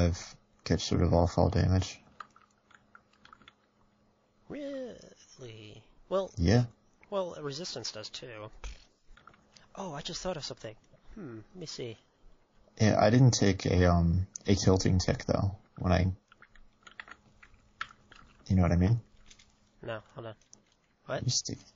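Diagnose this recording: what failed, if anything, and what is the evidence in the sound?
The codec stage failed throughout: the whole recording carries plainly audible MP3 compression damage. Faint detail swirls and warbles as weak frequency lines drop in and out frame by frame. That flicker, unlike a steady filter's dullness, points to a starved encoder, likely at around 32 kbps.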